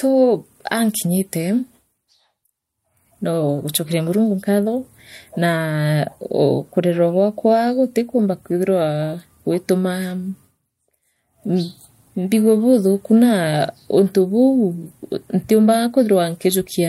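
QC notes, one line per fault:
No audible faults found in this speech recording.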